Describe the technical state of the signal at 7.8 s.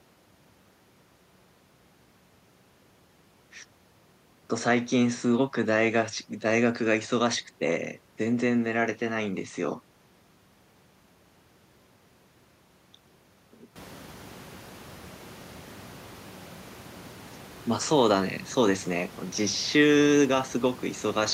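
At 7.8 s the audio is intact, with no technical fault present at that moment.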